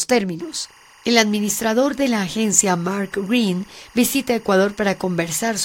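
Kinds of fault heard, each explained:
Timecode bleed: Linear timecode leaks in from a nearby track or cable, heard as a faint chirping warble around 1 kHz and 2 kHz, roughly 30 dB down.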